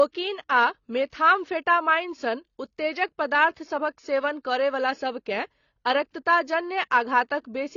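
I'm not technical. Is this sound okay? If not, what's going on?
No, not quite. Across the whole clip the speech sounds dull and a bit smeared, as if heard through a thin wall, and there's a plainly audible warbly, fizzy edge on drawn-out sounds and hissy consonants like s. Nothing comes through above about 6.9 kHz, which is why the crispness is missing. That's most likely AAC compression squeezed too hard: the encoder throws away detail it hopes you won't miss, and here you do.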